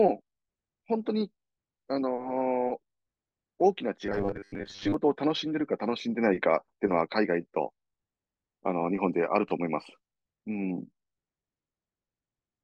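Robotic sound from repeated short buffers appears from 4.06 to 4.94 s: the speech collapses into a rigid metallic buzz at 100 Hz that still loosely tracks the words. This is likely a 10 ms chunk being replayed while roughly half the real audio is skipped.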